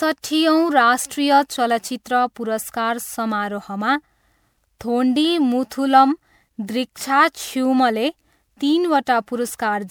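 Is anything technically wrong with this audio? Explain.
Yes. Generation loss runs through the whole speech clip. It sounds swirly, hollow and smeared, with blurred attacks. The likely cause is repeated MP3 encoding at 128 kbit/s, about five times, each pass adding fresh quantisation noise. The bandwidth stops near 20.8 kHz.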